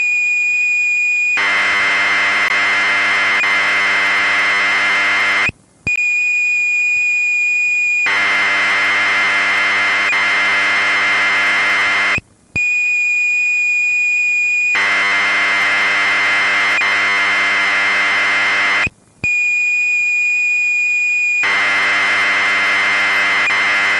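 A recording of sounds with three brief glitches from damaged data in a compressed stream, at 2.48–2.51 s, 5.96–5.98 s and 18.90 s. Each is a short chirp, squawk, click or hole lasting roughly 20 to 30 ms. Corrupted bytes in the encoded file make the decoder misread frames and lose sync until it finds the next valid frame header. A spectrogram shows each as a thin vertical smear of broadband or garbled energy, and the waveform shows an abrupt discontinuity there.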